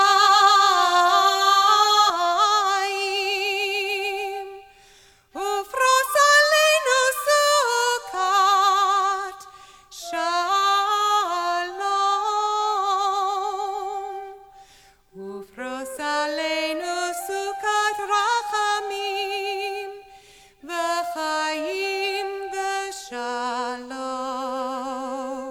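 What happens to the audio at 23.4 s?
Nothing goes wrong at 23.4 s; the audio is intact at that moment, with no dropout, click or other fault to be heard.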